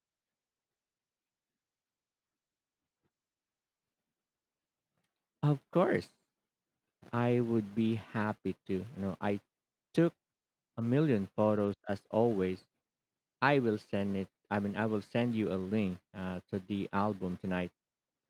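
No technical faults can be heard anywhere in this speech recording. Nothing in the signal path draws attention to itself at any point.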